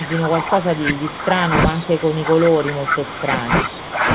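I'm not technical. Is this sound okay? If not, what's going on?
No. From the start to about 4.09 s, the voice keeps dipping and thinning, most likely speech suppressed in double talk: the call's echo control turned the talker down while the other side was speaking too. Unlike a bad connection, the voice fades rather than breaking into garbled bits.

From 1.68 to 1.83 s there is a quieter copy of the voice, arriving about a third of a second late. This is likely an echo leak: sound from the other end's loudspeaker got back into its microphone. Unlike a room echo, it is a separate late repeat, not a roomy tail.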